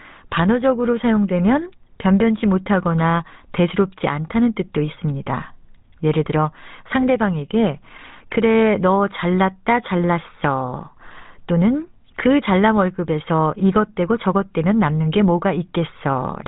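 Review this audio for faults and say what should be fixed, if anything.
GSM full-rate codec throughout: pulse-driven vocal-tract modelling gives plainly audible buzzy, gravelly speech, and the spectrogram is empty above 3.9 kHz, which fits a 13 kbps link. Record before the GSM stage or route the call over a wideband codec.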